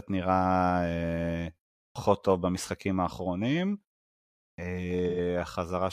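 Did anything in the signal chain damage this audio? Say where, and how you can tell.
Yes, two things got damaged. The first is at playback: a clipped start after a pause. At 1.9 s, after a pause of about 0.39 s, speech comes back in abruptly with roughly 56 ms of its onset gone. The same happens at 4.53 s, after a 0.76 s gap, with about 52 ms missing. The output device is dozing off in the silence and takes a moment to wake, so the first sounds never make it out.

The second is in the codec path: AAC frame loss with concealment at 5.09 to 5.19 s. For about 85 ms the sound turns smeared and noisy, with a phasey texture instead of clean speech. That's the decoder covering for missing data, which fits about two lost frames, by rebuilding from the last good spectrum. The gap is short enough that it gets patched over rather than fading to silence.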